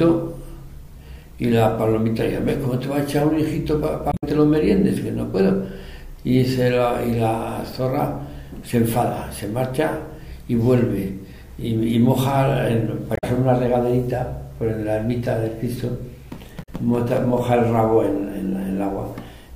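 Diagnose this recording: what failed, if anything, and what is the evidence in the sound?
The failure is in the compressed stream, at the codec stage. It is damaged data in a compressed stream. Three brief bursts of corruption break through the sound, at 4.09 to 4.24 s, 13.13 to 13.24 s and 16.59 to 16.69 s. Each lasts roughly a tenth of a second and sounds like a chirp, squawk, click or short hole. Bytes in the file were lost or overwritten. The decoder misread those frames, lost sync and had to hunt for the next valid frame header.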